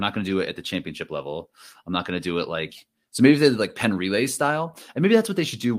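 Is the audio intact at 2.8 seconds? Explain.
Yes, the speech at 2.8 seconds is intact, with no audible technical fault at that moment.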